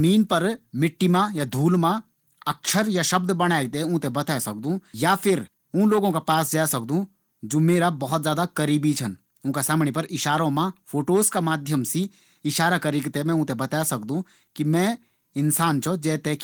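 Nothing is technically wrong with this speech recording. Opus voice compression can be heard at work, with only light coding traces across a full-width band, which fits a hybrid setting at around 20 kbps.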